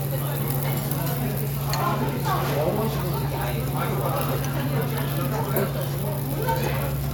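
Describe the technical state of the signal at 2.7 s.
At 2.7 s the sound carries clock slip clicks, which run from 0.10 s to 7.12 s. Ticks arrive roughly every 30 ms and merge into a soft rattle. The likely cause is two unsynchronised clocks around 700 ppm apart, each slip dropping or repeating one sample.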